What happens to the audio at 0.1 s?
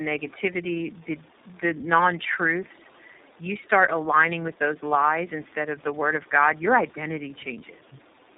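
At 0.1 s the speech already carries tandem speech coding, present throughout: G.729A then iLBC, with iLBC recoding G.729A's already degraded output, leaving rough, warbly, muffled sound with nothing above 3.8 kHz.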